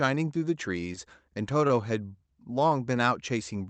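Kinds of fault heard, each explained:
Short stall from a late packet: At 1.68 s a packet arrives late and the jitter buffer runs empty. The receiver stretches the last sound for 21 ms, then resumes from the same point. Nothing is lost, but that sound is held too long and everything after runs 21 ms later.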